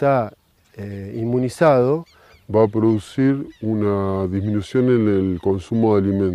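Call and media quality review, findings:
Section at the wrong speed, 2.51 s to end of clip. Playback drops to 0.845x, so everything after the change is slower and roughly three semitones deeper, with speed and pitch shifting together at the boundary. Likely cause: the section was resampled or played against the wrong clock in the editor or player, stretching its duration and lowering its pitch in step. Check the clock setting for that segment.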